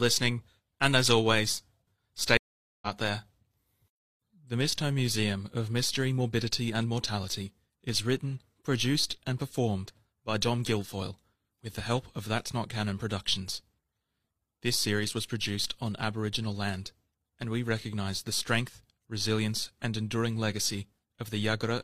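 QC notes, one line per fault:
2.37–2.87 s, stream reconnect: the speech drops to silence for about 0.45 s, then resumes roughly 0.4 s further on, so a short stretch is skipped. The connection broke, and the player reconnected to the live stream and restarted decoding mid-stream.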